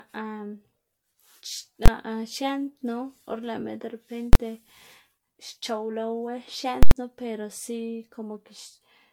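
Invalid numbers at full scale strike this speech recording at 1.86–1.88 s and 4.33–4.35 s as single bangs, and at 6.83–6.91 s as a loud pop at each edge with dead air between. Each time, a calculation produced invalid values that were clamped to maximum, in runs that fit 1024- and 4096-sample blocks. Generation loss runs throughout as a swirly, hollow smear with blurred attacks, likely from about five successive MP3 re-encodes at a rate near 96 kbit/s, each quantising on a shifted frame grid.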